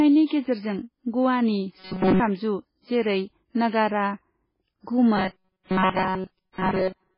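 Speech carries heavy MP3 compression damage from start to finish. Nothing is left above 5.3 kHz, so the top is dull and s sounds are blunted, and the remaining band has the watery, swirling texture of spectral lines dropping in and out between frames. That degree of damage is likely from MP3 encoding at a very low bitrate, in the region of 16 kbps, where the encoder cuts the treble and discards weak components to stay within budget. Robotic sound from repeated short buffers appears twice, from 1.78 to 2.20 s and from 5.17 to 7.18 s. In both stretches the sound takes on a rigid metallic buzz at 188 Hz. The first stretch is entirely replaced by repeats, and in the second most of the audio is repeated. A 188 Hz buzz corresponds to a segment about 5.3 ms long being looped, so the likely cause is audio arriving late and the playback side refilling the gap by replaying its last short buffer while the real audio is skipped.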